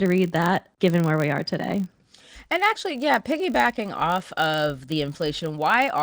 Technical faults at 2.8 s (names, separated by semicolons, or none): filter restarted on every block